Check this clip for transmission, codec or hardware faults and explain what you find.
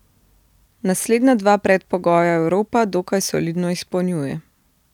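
No transmission, codec or hardware fault can be heard anywhere in the speech, which stays intact and continuous throughout.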